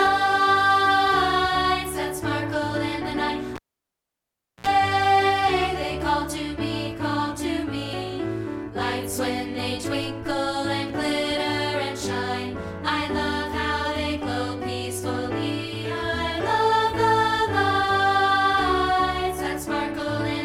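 A cable pulled and plugged in runs from 3.56 to 4.67 s. A live lead is yanked with a pop, leaving about 1.06 s of near silence. A 64 ms burst of 60 Hz mains buzz sounds as the tip reconnects, then a second pop restores the sound.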